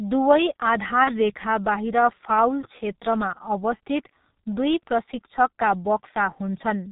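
A speech clip carried through the G.723.1 codec throughout. Everything above 4 kHz is missing, so the voice sounds muffled and hoarse, with smeared consonants. The damage is heavy, consistent with the 6.3 kbit/s mode. Unlike simple low-pass filtering, the slow-updating voice model adds a rough, hoarse texture on top of the lost treble. At 1.04 to 1.18 s there is VoIP packet loss concealed by the speech codec. The sound stretches and fades where the decoder repeats its last pitch and filter, which fits a single lost 30 ms frame. The voice then stays weak or distorted until about 1.18 s. That slow recovery distinguishes it from a clean dropout or a click.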